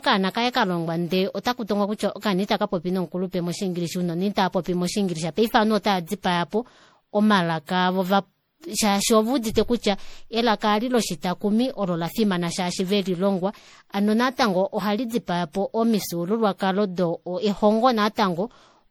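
Right through, the speech has generation loss: swirly, hollow and smeared, with blurred attacks, likely from about seven passes through a 64 kbit/s MP3 encoder.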